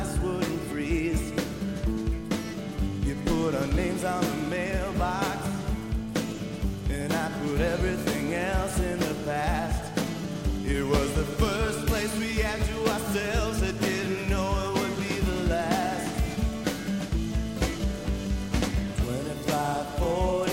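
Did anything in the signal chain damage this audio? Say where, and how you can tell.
Yes. A steady low 60 Hz tone, with some low harmonics, runs under the whole clip at roughly 20 dB below the sound. This is mains hum, picked up in the analogue wiring, where a ground loop or nearby transformer let the power line leak into the signal.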